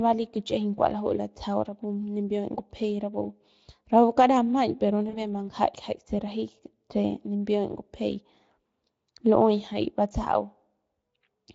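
Speech carried through the Speex codec, with one instance of VoIP packet loss concealed by the speech codec from 5.09 to 5.17 s. About 40 ms of audio is missing, which fits two dropped 20 ms frames. The decoder extends the last pitch and filter into a fading buzzy tone or coloured noise, visible on a spectrogram as a smeared, held spectrum and on the waveform as a shrinking envelope.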